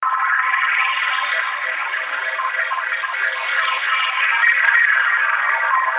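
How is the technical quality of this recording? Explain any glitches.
The technical quality of the recording is good, and there are no glitches to explain.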